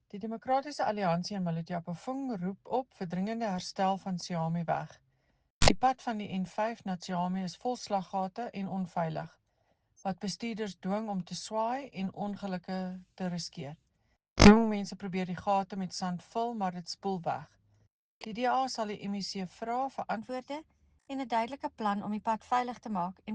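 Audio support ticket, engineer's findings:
Section at the wrong speed, 20.17 s to the end at 23.34 s. Runs 1.12x fast, pitch up about two semitones, everything hurried and brighter. Likely a resample or clock mismatch in the player or edit step, applied to that closing stretch only. Speed and pitch shift together at the 20.17 s boundary, so it's not a pitch-shift effect. Worth checking which sample rate that last segment was tagged with.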